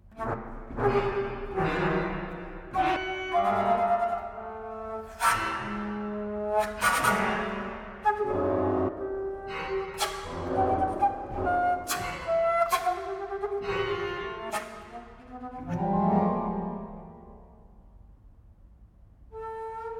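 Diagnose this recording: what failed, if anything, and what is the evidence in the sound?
Short chirps and blips interrupt the sound at 0.33 to 0.35, 2.95, 8.87 to 8.89, 11.45 and 14.49 s, each about 20 ms. This is damaged data in a compressed stream at the codec stage: corrupted frames desync the decoder until it finds the next frame header.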